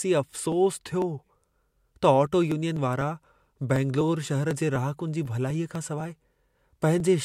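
A speech recording carries periodic USB or driver dropouts from 0.27 s to 7.00 s: a tick roughly every 0.25 s, about thirty in all, each where around a millisecond of audio is skipped and the waveform jumps. A background task stalling the bus or driver on a fixed schedule would do this. Unlike random clicks or network packet loss, the spacing never varies, and the ticks appear only where there is signal.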